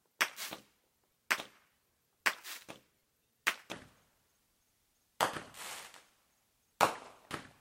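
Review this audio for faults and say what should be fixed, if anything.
From 0.0 to 3.72 s the audio plays back as if read two samples at a time (double speed): it runs twice as fast and an octave higher (12 semitones). The reader treats each pair of samples as one frame, as though the stream had two channels or samples twice as wide. To prevent it, make the reader use the stream's actual channel count and sample width.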